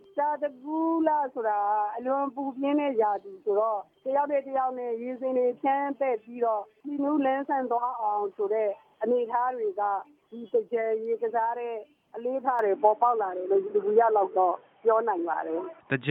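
At 12.59 s the system most likely switched its input to a poorer device, and the audio stays on that path to the end. The new device passes nothing above 3.8 kHz, so the top of the spectrum drops away at once and the sound turns dull and boxy. There is no gap at the switch, but the level shifts by a few decibels and a faint new noise floor appears well beneath the sound.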